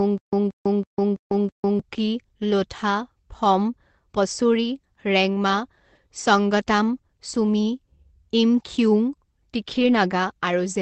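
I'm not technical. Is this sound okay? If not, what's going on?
No. From the very start until 1.79 s, a short snippet of about 0.18 s repeats five times with brief silences between. This stutter with silent gaps likely comes from the playback stalling and replaying its last piece, so some audio is lost.

From 9.71 to 9.89 s the sound turns briefly rough and noisy. That is a lost packet rebuilt from error correction: some audio went missing, and a lower-quality backup copy filled the gap.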